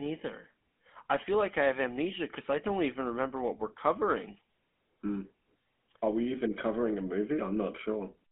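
From start to finish, the speech was carried by the GSM full-rate codec, consistent with 13 kbps, which models the vocal tract and drives it with a sparse pulse excitation and limits the band to 200 Hz to 3.5 kHz. The result is a muffled, plainly buzzy, gravelly roughness.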